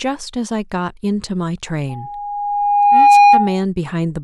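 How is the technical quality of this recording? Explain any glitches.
The recording has one serious fault, a loudspeaker feedback squeal. From 1.89 s to 3.64 s, an 817 Hz tone builds over about one and a half seconds as the mic-speaker loop exceeds unity gain, ending roughly 15 dB above the speech.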